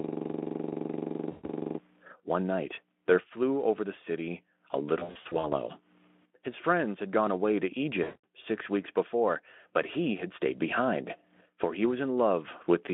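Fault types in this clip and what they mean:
System hang loop: the host or driver froze while the audio hardware kept replaying its ring buffer. A 42.67 ms slice repeats about 41 times from the start to 1.79 s, a rapid 23.4 Hz stutter that fits a 2048-sample buffer.
VoIP packet loss concealed by the speech codec: the Speex decoder bridged missing packets by extending its last pitch and filter with falling gain. The speech smears into a fading buzzy tone or coloured noise at 1.32 s (120 ms), 4.99–5.46 s (240 ms, scattered) and 8.03 s (200 ms).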